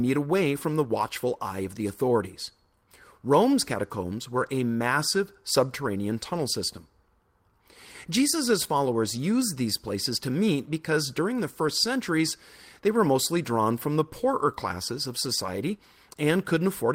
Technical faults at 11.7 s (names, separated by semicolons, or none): lost packet rebuilt from error correction